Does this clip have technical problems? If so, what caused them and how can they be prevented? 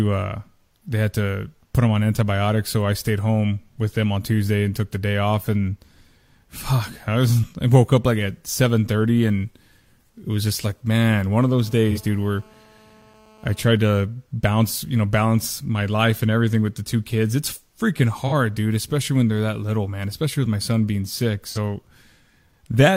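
Yes. Between 11.5 and 13.78 s there is GSM phone buzz: a nearby 2G handset on a call pulses at 217 Hz, and the audio circuit rectifies those bursts into a hard, raspy tone about 30 dB below the speech. A spectrogram shows a steady comb of horizontal lines at 217 Hz and its harmonics across that span. Keeping phones away from microphones and cables, or in flight mode, prevents it.

AAC frame loss with concealment occurs at 11.91–11.98, 18.27–18.33 and 21.49–21.58 s. Each gap of about 43 ms fits a single lost frame. The decoder guessed from the previous spectrum, producing brief smeared, noisy patches. On a spectrogram these look like blurred vertical smudges, and the waveform loses its fine detail there. A more reliable transmission link or stronger error protection prevents this.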